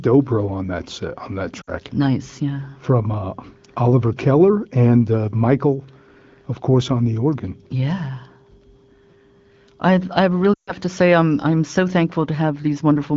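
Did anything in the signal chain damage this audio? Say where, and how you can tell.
Yes, the damage is on the radio/network side: lost AMR speech frames. Around 1.61 to 1.70 s there's a short dropout where the sound falls to near silence for roughly 60 ms, which fits three 20 ms frames. At 10.53 to 10.73 s a longer gap of about 140 ms drops to near silence within two frames before the voice comes back a bit weak. The frames failed their checksum, so the AMR-WB decoder kept replaying its last good pitch and vocal-tract settings at dropping gain.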